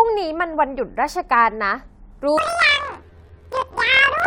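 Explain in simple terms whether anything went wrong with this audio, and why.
From 2.38 s to the end, the speech jumps an octave higher with a 43 Hz flutter: planar audio read as interleaved. Unlike a speed-up, the pace stays normal.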